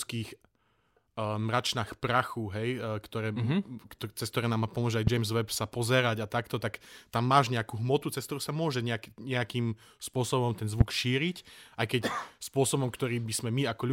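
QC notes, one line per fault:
5.07–5.10 s and 10.81–10.83 s, loud pop: a single sharp pop each time, roughly 20 dB above the speech, with the talking carrying on underneath. It's likely a voltage spike from a plug, switch or static, with the downstream circuitry shaping it into that click.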